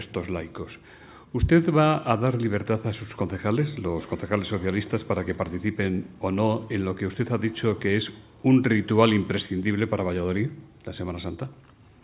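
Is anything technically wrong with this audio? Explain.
No, nothing technically wrong can be heard in this audio. There are no audible faults anywhere in it.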